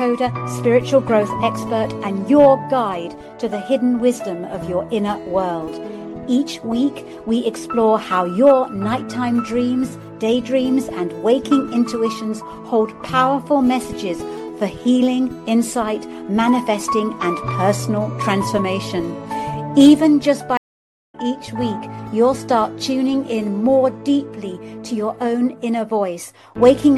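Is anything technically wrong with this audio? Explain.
Yes. At 20.57 s the sound drops out in a stream reconnect that lasts until 21.15 s. The connection broke, the player fell silent for about 509 ms, then reconnected and started a new decoder partway through the stream. When sound returns it has skipped forward by roughly 0.7 s, so that stretch is simply missing. On a waveform this shows as a flat gap with a clean, faded-in restart, and a spectrogram shows a blank vertical band.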